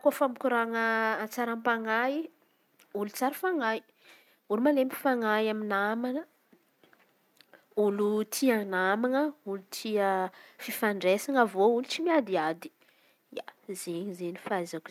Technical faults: none

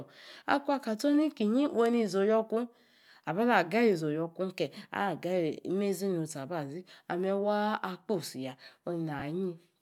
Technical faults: lost LE Audio frames

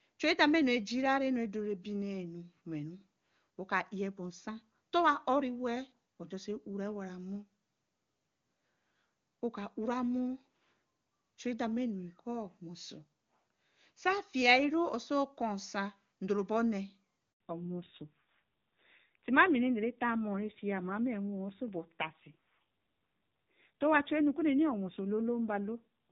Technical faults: handover gap; fallback to narrowband

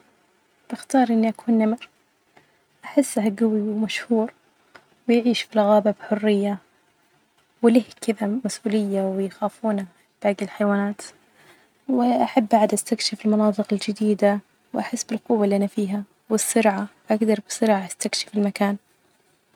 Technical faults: none

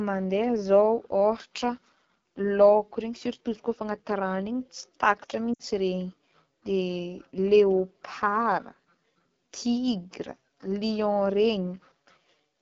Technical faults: AMR wideband (HD Voice) codec; lost AMR speech frames

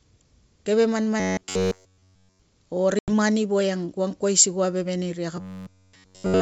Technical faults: robotic sound from repeated short buffers; packet loss on an ADPCM call

